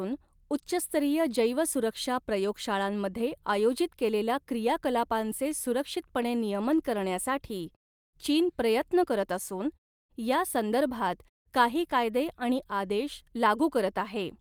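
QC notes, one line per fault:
No faults were found in this speech clip. In the pauses the background fades to silence and comes back in time for the next sound, with only very quiet sound lost.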